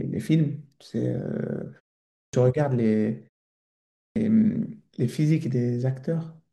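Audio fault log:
2.03 s and 3.85 s, clipped start after a pause: the output dozes off in the gap, so about 0.3 s of each restart is lost and the audio jumps in abruptly.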